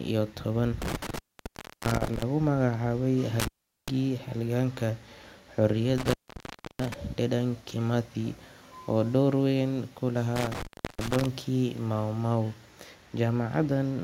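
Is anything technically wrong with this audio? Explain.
Yes. The speech drops out four times, each with crackle at the edges and faint hiss in the gap: 0.82 to 2.23 s, just after "iyo toban", with about 0.68 s open; 3.40 to 3.88 s (0.40 s); 5.98 to 6.94 s (0.66 s); and 10.36 to 11.26 s, after "oo door weyn ku" (0.36 s). This is intermittent contact, where a loose cable or plug briefly breaks the signal path and the scraping connection crackles as it opens and closes.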